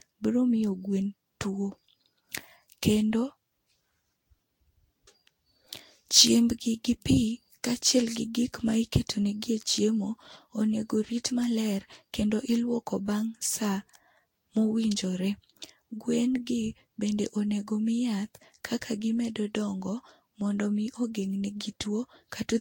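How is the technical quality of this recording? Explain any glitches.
The recording is degraded throughout by generation loss. The speech sounds swirly, hollow and smeared for the whole clip, and consonant attacks blur. Nothing is heard above 16.6 kHz. This likely comes from about seven rounds of lossy encoding, which fits Vorbis near 64 kbit/s. Each pass requantises on a shifted frame grid, so noise and spectral holes accumulate.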